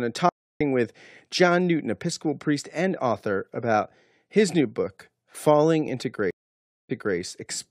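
Stream reconnects at 0.29 s and 6.31 s: the link drops, 304 then 585 ms of silence, and a fresh decoder resumes slightly later, then 279 ms earlier.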